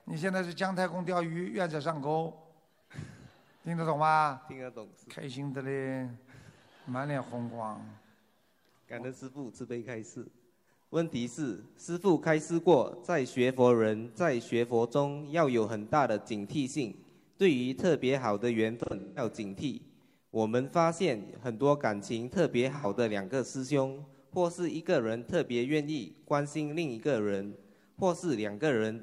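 Around 18.80 to 19.23 s the audio turns smeared and noisy in several short patches, the longest dipping for roughly 150 ms before recovering. A briefer phasey smudge follows at 22.75 to 22.86 s, about 85 ms long. Both are AAC frame loss with concealment: frames went missing, and the decoder rebuilt each gap from the last good spectrum, which fits six frames lost in the first and two in the second.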